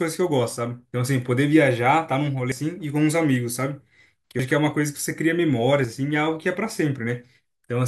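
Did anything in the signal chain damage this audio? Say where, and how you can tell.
Yes. Compressed frames were skipped at the codec stage. The speech jumps ahead at 2.52 s, 4.39 s and 5.84 to 5.93 s, losing roughly 100, 150 and 100 ms.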